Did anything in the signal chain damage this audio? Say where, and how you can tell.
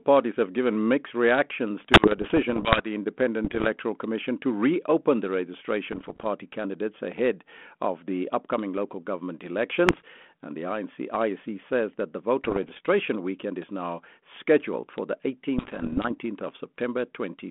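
Yes, bit errors on an ADPCM link damaged the transmission stage, at 1.83–2.87, 3.45–3.67, 5.93–6.26, 9.87–10.02, 12.44–12.80 and 15.58–16.11 s. A flipped bit, at a rate near one percent, corrupts both the decoded difference and the adaptive step size and predictor, so each hit rings on as rough, poppy bursts with brief level jumps. The waveform shows spikes and sudden envelope changes. The spectrogram shows broadband vertical smears within a band limited to about 200 Hz to 3.4 kHz, which fits a 32 kbit/s G.726 link.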